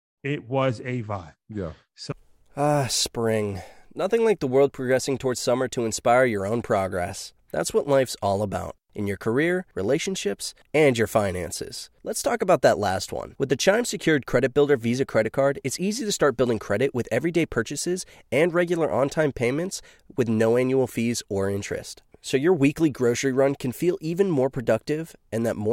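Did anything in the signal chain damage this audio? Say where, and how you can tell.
No, nothing in the signal chain damaged this speech audio.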